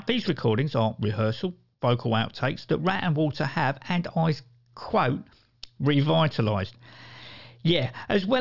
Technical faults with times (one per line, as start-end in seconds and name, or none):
none